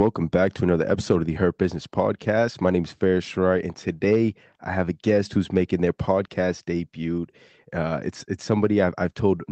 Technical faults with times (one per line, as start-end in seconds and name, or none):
none